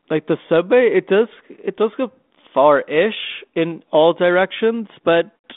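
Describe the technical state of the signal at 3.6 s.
At 3.6 s the speech is intact, with only the light coding grain and 200 Hz to 3.6 kHz telephone band of the 32 kbit/s G.726 ADPCM link, which is working as it should.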